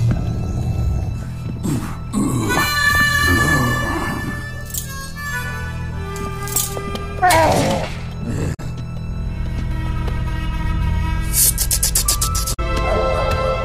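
The audio has damaged data in a compressed stream at 8.50 to 8.60 s and 12.50 to 12.59 s. Corrupted frames make the decoder misread them and hunt for the next frame header. Unlike a plain dropout's clean silence, this gives a chirp, squawk, click or brief hole.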